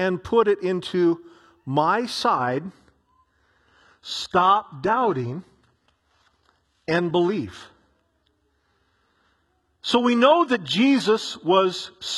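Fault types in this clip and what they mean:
Adaptive stream at a lower bitrate: The player switched to a much lower-bitrate version of the stream because the connection slowed. The switch comes at 2.35 s, right after "put it into my", and lasts to the end. There is no gap. The speech suddenly loses its natural treble, and the top end turns synthetic. Codec artefacts rise. This fits a drop from a full-band AAC stream to a low-rate HE-AAC one with rebuilt highs.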